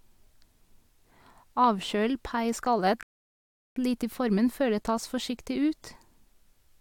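At 3.03 s the speech halts and the clip falls to silence until 3.76 s, a rebuffering stall of roughly 0.73 s. The player exhausted its downloaded audio and paused playback while waiting for more data to arrive. When the sound returns it picks up at exactly the point where it broke off, so no material is skipped or repeated. The gap simply inserts about three quarters of a second of dead air into the speech.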